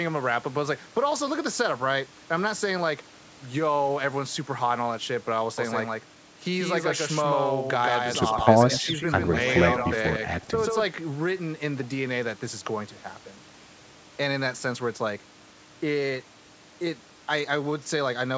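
A doubled audio track runs from 5.58 to 10.84 s. A second full-band copy of the speech trails roughly 150 ms behind, about 5 dB quieter and dry, likely captured again through a slower path.

Echo leak appears at 8.73–8.77 s and at 10.42–10.47 s as brief delayed scraps 156 ms behind the speech. The first is about 15 dB down, and the second is about 35 dB down. The likely cause is a loudspeaker pickup that the echo canceller failed to remove.

Speech suppressed in double talk follows each echo, at 8.8–8.9 s and 10.49–10.56 s. The speech dips by around 10 dB for up to a tenth of a second, likely because the canceller turned both talkers down while they overlapped.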